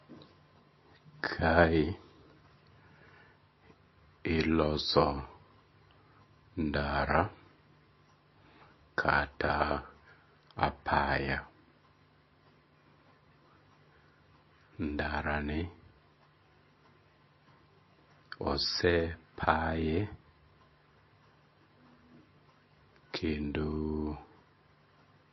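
From start to finish the speech carries plainly audible MP3 compression damage, likely from a heavily starved encoder; the damage points to a bitrate of around 24 kbps. Nothing survives above 5.8 kHz, so sibilants lose their edge, and the weak frequency lines that flicker on and off between frames give the speech a watery, swirling texture with smeared consonant attacks. That swirl is what separates it from a simple low-pass filter, which would sound dull but steady.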